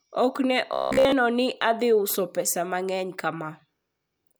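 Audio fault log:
0.73–1.12 s, robotic sound from repeated short buffers: the speech becomes a rigid, metallic buzz locked at about 66.7 Hz while still loosely tracking the syllables. A likely cause is starved playback repeating the last 15 ms of audio over and over, so most of this stretch is repetition and the real signal is skipped. Unlike a mains hum, the buzz exists only inside this span and gates with the speech; unlike codec warble, its pitch never drifts.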